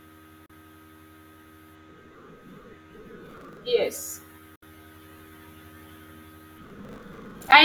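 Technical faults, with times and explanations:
0.46 to 0.50 s: digital broadcast dropout. The speech fades out within about 3 ms and goes silent for 32 ms, which fits one lost frame muted by the receiver.
3.26 to 3.57 s: processor overload crackle. Gritty crackle rides on the speech as roughly ten-millisecond buffers miss their deadline and replay stale audio with hard edges.
4.56 to 4.63 s: digital broadcast dropout. A quick 3 ms fade leads into a 64 ms mute, consistent with two consecutive frames lost or failing their checksum.
6.64 to 7.52 s: processor overload crackle. A longer tearing burst, around fifty missed buffers of roughly 10 ms, each refilled with old audio that leaves abrupt discontinuities.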